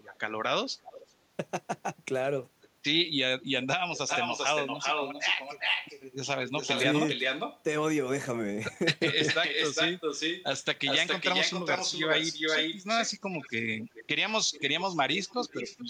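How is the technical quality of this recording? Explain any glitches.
The recording has two faults: repeated echo leak throughout and one brief moment of speech suppressed in double talk.

Echo leak occurs at 0.0–0.18 s, 0.69–1.07 s, 2.61–2.69 s, 3.42–7.62 s, 9.08–14.05 s and 14.51–15.84 s. A delayed copy of the speech trails the original by about 0.39 s early on, stretching to about 0.43 s by the end. The early scraps sit faint, roughly 20 to 30 dB down. The long stretches at 3.42–7.62 s and 9.08–14.05 s come back about as loud as the speech itself, and the last one is about 10 dB down. The likely cause is a loudspeaker at the far end whose echo canceller let its microphone pickup pass back into the call.

Speech suppressed in double talk occurs at 0.89–0.94 s, inside the second echo burst. The speech level dips by up to about 15 dB for roughly 50 ms, a short audible duck in the speech. 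This likely happened because the echo canceller could not tell the talker from the returning echo while both were present, so it attenuated both together.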